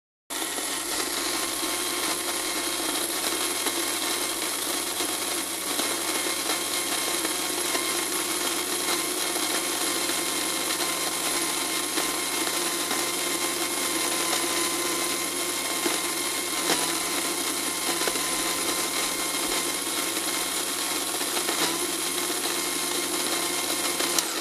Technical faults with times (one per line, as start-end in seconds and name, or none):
0.00-0.30 cut-off start